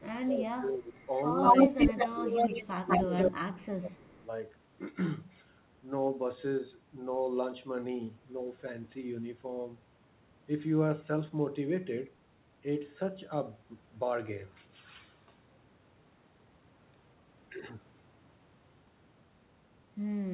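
An echo canceller that likely could not separate the near talker from loudspeaker echo while both sides spoke causes speech suppressed in double talk in this speech recording. The voice sinks by roughly 15 dB between 0.0 and 0.94 s, then by up to about 20 dB from 1.69 to 4.11 s. An echo leak follows, likely because one side's canceller on a loudspeaker left part of its microphone pickup in place. A copy delayed by 199 ms sits roughly 10 dB louder than the voice from 0.94 to 3.31 s, then returns faintly, about 30 dB down, from 4.05 to 4.24 s. Nothing sounds above 4 kHz, consistent with narrowband G.711 mu-law coding on the call path.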